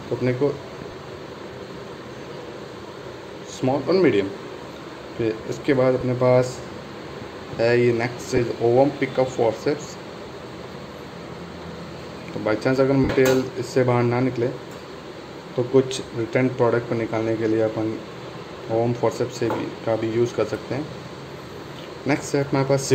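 Lost LE Audio frames cause four short dropouts, at 0.91 s, 6.00 s, 8.36 to 8.39 s and 13.04 to 13.10 s. The decoder papers over each gap with a noisy smear, and the longest, about 52 ms, starts to fade. The light lossy compression underneath does only slight damage.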